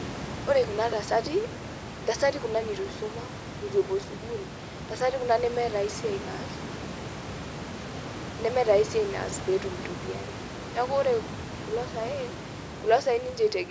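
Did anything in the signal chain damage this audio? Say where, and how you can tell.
No, nothing in the chain damaged this speech; the call microphone processing limits the band to nothing above 8 kHz and trims the lowest bass as designed, and the room noise sitting about 13 dB below the speech belongs to the recording space rather than to any stage of the system.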